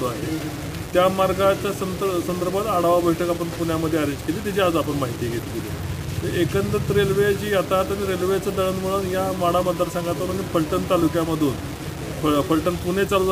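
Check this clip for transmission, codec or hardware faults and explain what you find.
One fault runs through all of the audio: low bit depth without dither. The sound was likely quantized to very few levels, which fits about 5 bits with plain rounding and no dither added first. The rounding error tracks the signal rather than being randomized, and it lands roughly 15 dB below the signal, a high error floor. Quiet passages become grainy and gritty, and content below one step sputters or drops out, while dense or noisy stretches carry the error as a near-steady hiss.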